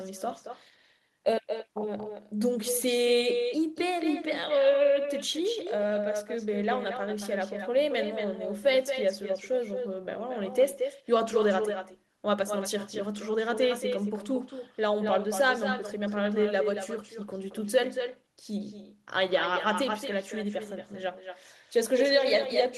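Throughout the speech, the far end's loudspeaker feeds back into its microphone and nothing cancels it, an echo with no canceller. Every phrase returns about a fifth of a second later, only about 6 dB quieter, as a thinner shadow.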